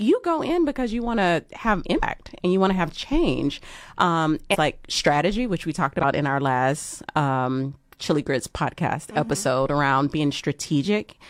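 Damaged data in a compressed stream disrupts this speech recording three times: corrupted bytes make the decoder misread frames, lose sync and hunt for the next valid header. Each event is a brief disruption lasting about 50 to 70 ms. The first is at 1.98 to 2.03 s, between "you want to have" and "and you want to". The second is at 4.50 to 4.57 s. The third is at 6.00 to 6.05 s, after "strategy which we talked" and before "in our last um".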